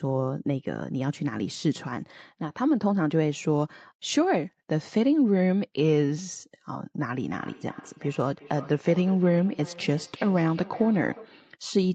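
From 7.31 s to 11.42 s the speech comes back at itself roughly every 0.4 s, a thinner, ringing copy trailing each phrase, peaking about 20 dB below the direct speech. This is a feedback echo between two devices: a second device in the same room plays the call aloud, and this microphone picks it up and sends it back. The local echo canceller only removes its own playback, so the leaked copy survives.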